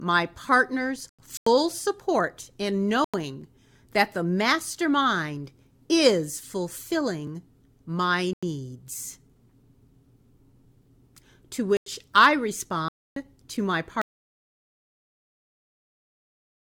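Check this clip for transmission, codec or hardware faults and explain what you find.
The speech has three kinds of fault: muted corrupt frames, one dropped buffer, and a final dropout to silence.

Corrupt frame muted, at 0.96–1.47, 3.04–3.42, 8.33–8.43, 11.77–11.86 and 12.88–13.16 s: the decoder rejected damaged frames and the player substituted silence, leaving abrupt holes with timing intact.

Dropped buffer (overrun), at 7.27 s: the sound jumps ahead by a few milliseconds, likely because samples were overwritten before being read and the remaining sides were spliced.

Audio dropout to silence, from 14.0 s to the end: the sound cuts out into silence with no room tone, likely from the input being lost while the recorder kept writing silence.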